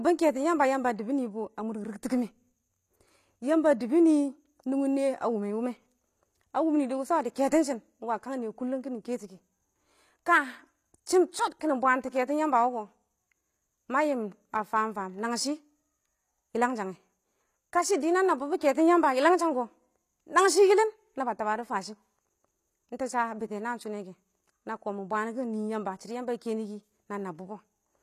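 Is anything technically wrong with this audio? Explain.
Yes. Throughout the speech, s sounds are gritty and lispy, and nothing reaches above 14.9 kHz. That is likely HE-AAC compression rebuilding treble by band replication, consistent with roughly 24 kbps.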